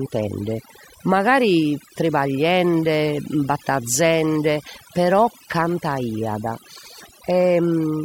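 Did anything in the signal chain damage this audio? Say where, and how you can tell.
Yes. The damage comes from overdone noise removal at the call processing stage, and it runs the whole way through the speech. The gaps between phrases drop to near silence, with little twinkling specks where noise bands flicker on and off. The suppressor was set too aggressively, so it cuts any band that sits near its noise estimate, and the quieter parts of the voice get cut with it.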